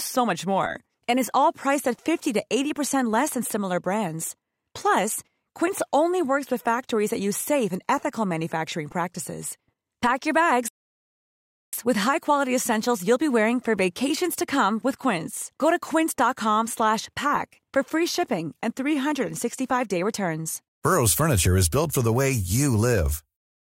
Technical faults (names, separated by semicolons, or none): rebuffering stall